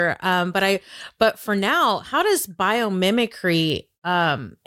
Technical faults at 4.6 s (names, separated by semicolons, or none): none